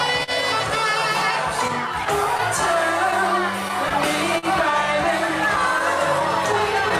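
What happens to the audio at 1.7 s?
At 1.68 s a run of scattered short gaps begins and lasts until 4.46 s. Around seven packets went missing or arrived too late in that stretch, and the receiver covered each hole by stretching the preceding sound forward. The concealed pieces total about 100 ms, the longest around 40 ms, so the audio stays mostly clear but is broken by brief ticks, small smears and momentary hiccups scattered across those three seconds.

Clock drift between sender and receiver runs beneath this moment as well. The sender's clock is slow by roughly 3 percent, so the receiver's jitter buffer keeps draining and has to be topped up by repeating short slices of sound. That produces small timing stumbles at uneven intervals, which blend with the gap-related hiccups from 1.68 s onward.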